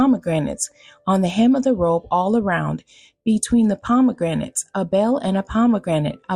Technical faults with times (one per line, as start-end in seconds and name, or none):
none